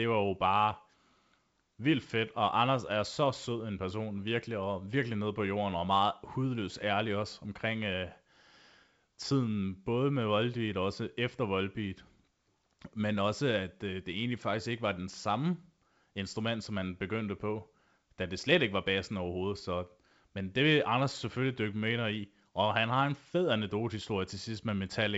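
Nothing stood out on listening to this speech, which comes through G.722 wideband telephone coding at 64 kbit/s with nothing above about 7.7 kHz.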